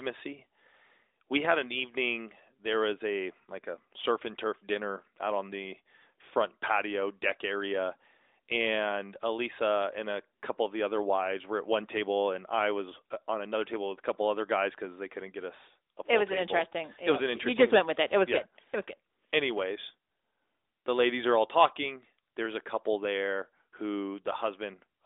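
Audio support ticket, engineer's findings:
No faults found on review; nothing to action.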